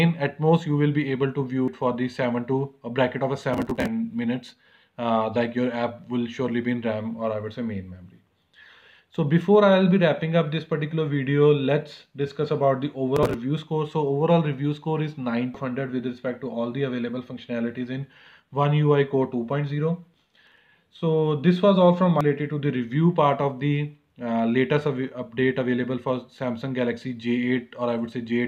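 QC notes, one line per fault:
1.68 s, 15.54 s and 22.21 s: damaged data in a compressed stream. Each is a tiny blip where the decoder hits corrupted bytes, can't make sense of that frame, loses sync and jumps to the next header.
3.54–3.87 s, 13.16–13.34 s and 20.14–20.58 s: processor overload crackle. The CPU falls behind and misses a long string of tiny buffer deadlines, which fits buffers of around 5 ms. Each missed chunk is simply skipped, leaving hard-edged gaps that pile up into a gritty, tearing crackle until the load eases.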